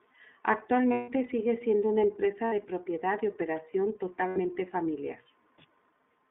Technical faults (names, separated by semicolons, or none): iLBC codec; lost iLBC frames